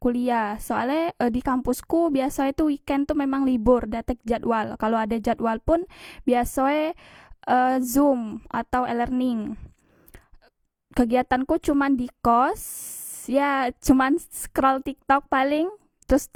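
The speech in this clip was likely passed through more than one lossy codec in sequence, an HE-AAC stage followed by Opus, a case of transcoding between lossy codecs that runs for the whole recording. The second encoder spends its bits reproducing the first one's errors while adding its own, so two kinds of coding artefact sit layered on the voice throughout. The textures point to rates around 40 and 48 kbit/s, and nothing survives above 20.2 kHz.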